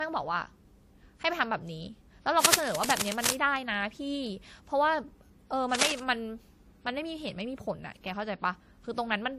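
From the very first second the speech carries two layers of codec smearing, which sounds like transcoding between lossy codecs, likely a WMA pass followed by AAC-LC at modest bitrates. The artefacts of each are heard together, and nothing survives above 15.2 kHz.

From 2.43 to 3.35 s, and again from 5.75 to 6.00 s, there is cable scratch noise: dense, ragged rustling about as loud as the speech itself. It's likely a worn cable or connector being moved, its contact resistance jumping around.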